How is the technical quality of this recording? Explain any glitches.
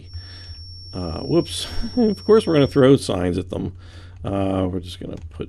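One fault stands out: a feedback whistle from the start to 2.87 s. A thin, steady tone at 5.5 kHz sits behind the sound, roughly 20 dB below it, and swells and fades slowly in level before stopping. The likely cause is a loudspeaker-to-microphone loop running just at the edge of feedback, where the gain at that one frequency holds the tone ringing without letting it build into a howl.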